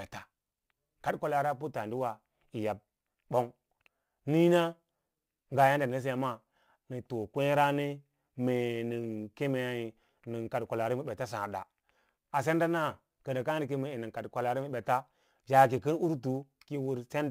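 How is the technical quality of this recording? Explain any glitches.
The recording carries one persistent fault, sample clock jitter, present throughout the speech. A fine hiss and grainy roughness ride on the voice, growing on loud and sibilant sounds and disappearing in the pauses. The converter's clock wanders by roughly 10 microseconds, so each sample is captured slightly off time; the resulting error scales with how fast the waveform is changing, sitting only about 30 dB below the signal and making steep, bright passages sound gritty.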